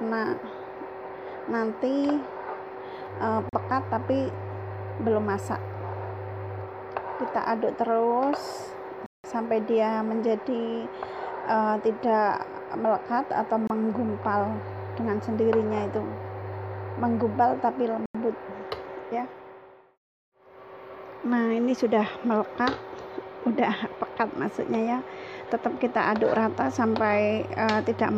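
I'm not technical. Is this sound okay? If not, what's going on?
No. The sound drops to silence four times: at 3.49 s for 38 ms, 9.06 s for 178 ms, 13.67 s for 25 ms, and 18.06 s for 88 ms. Each is likely a Bluetooth stall. Interference delayed the wireless audio, so the headphones briefly ran out.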